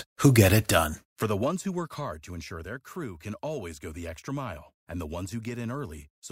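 Listening to this speech recording, nothing technical stood out.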